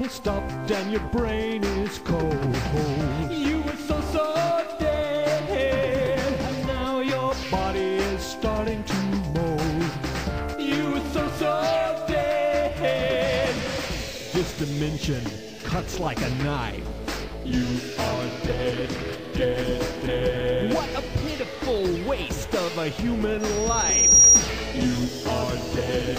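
At 23.40 s a loudspeaker feedback squeal begins and runs until 24.49 s. A single tone near 5.7 kHz rises out of the sound. It swells over roughly the first 0.7 s and then holds as a piercing whistle. At its peak it sits about 15 dB above the program. The microphone was picking up the loudspeaker it fed. At that frequency the loop gain passed one, so the tone kept growing itself.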